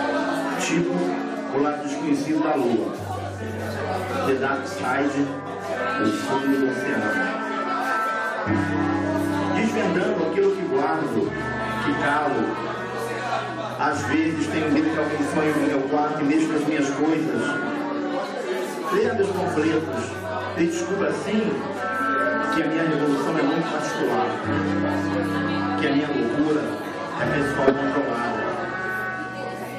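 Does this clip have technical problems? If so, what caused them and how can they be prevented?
Yes: compressed frames were skipped at 14.73–14.80 s, 22.42 s and 27.67–27.73 s. Frames were lost or rejected by the decoder, so the audio jumps ahead by roughly 150, 70 and 50 ms. Verifying file integrity and using error-resilient transport prevents this.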